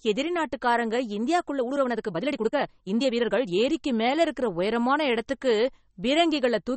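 From start to finish the speech sounds watery and swirly, with sibilants turning metallic and chirpy and nothing audible above 8.4 kHz. That points to MP3 compression, likely at a low bitrate, which fits something around 32 kbps. Starved of bits, the encoder cuts the treble at a fixed frequency and discards weak spectral lines, which then flicker on and off from frame to frame. That flickering is the swirl, and the attacks of consonants are smeared as well.

Between 1.56 and 3.56 s the pace jumps abruptly to about 1.52 times normal speed while the pitch stays put, so the speech sounds rushed before dropping back to its earlier tempo. This is a time-stretched section, likely produced by software that squeezed the passage to fit a shorter length. It kept the pitch by dropping short slices of audio rather than playing everything faster, and that dropping creates the hurried texture.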